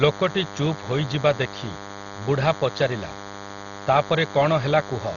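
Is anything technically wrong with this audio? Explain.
Yes, two faults run through the whole speech clip.

A DECT cordless phone buzz comes from a nearby handset or base pulsing every 10 ms, which the audio circuit rectifies into a thin 100 Hz buzz with dense harmonics, sitting roughly 15 dB below the speech.

Heavy lossy coding, likely Dolby Digital at a very low bitrate, removes everything above 6.9 kHz and fills starved bands with noise, leaving the speech dull with rough, fluttering texture.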